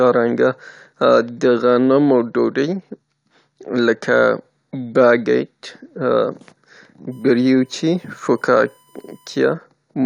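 Current drawn by the USB bus in 1 ms frames leaks into the power or ground of the speech path, producing USB whine from 7.11 to 9.53 s: a steady, fixed-pitch 1 kHz tone, faint at roughly 40 dB below the speech.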